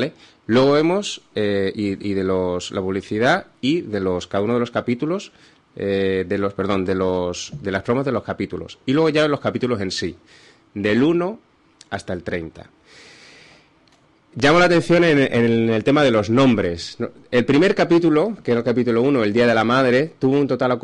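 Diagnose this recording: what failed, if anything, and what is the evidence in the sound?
Nothing stood out on listening; no stage of the chain, from the analogue wiring through to playback, left any audible trace of a failure.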